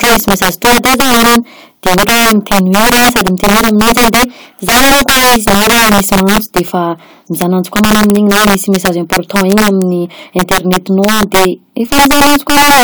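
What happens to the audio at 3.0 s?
Violent, sharp cracks burst from the louder speech peaks at 3.0 s, as they do across the whole clip. This is integer overflow: with the signal driven about 11 dB too hot, roughly 7 percent of samples exceed the integer limit and wrap to the opposite extreme instead of being held there.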